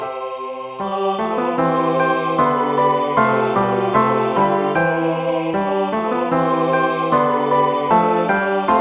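Nothing stood out on listening to this audio, which has the narrow, telephone-like sound of a call path.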